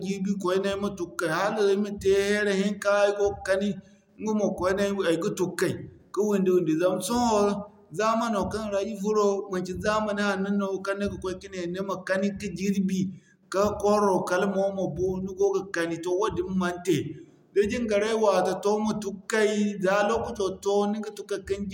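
No technical faults can be heard in this speech recording. There is nothing to place on a timeline, because no moment stands out from the surrounding audio.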